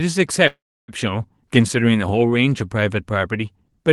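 Packets most likely stalled on the network, letting the receiver's jitter buffer run dry from 0.47 s to 0.91 s. This is a call audio freeze. The receiver covers the gap by extending the last sound into a brief fading buzz or hiss, which then drops to silence for roughly 0.3 s. When delivery resumes, the speech picks up exactly where it stopped, so nothing is lost, but everything after arrives about 0.41 s later. The clip's 12 kHz upper limit fits an Opus call path.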